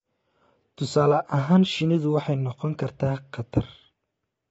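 Low-delay AAC compression, likely AAC-ELD at a rate consistent with about 24 kbps, affects this speech clip throughout. The damage is plainly audible, and nothing is present above 7.7 kHz. Short coding frames resolve the voice's pitch harmonics poorly, so a modest bitrate leaves audible artefacts.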